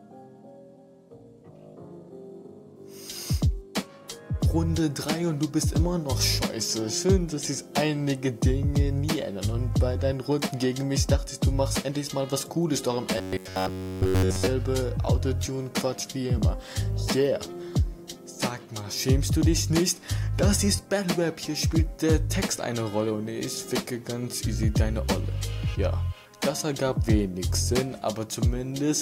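From 13.18 to 14.47 s the sound turns into a robotic buzz from repeated short buffers. For that stretch the audio is essentially all repeats: a fixed tone of about 94 Hz sits on top, rigid and metallic, only loosely tracking the original. That pitch fits a chunk of roughly 10.7 ms being looped over and over. The likely cause is new audio not arriving in time, so playback kept recycling the last buffer while the real material was skipped.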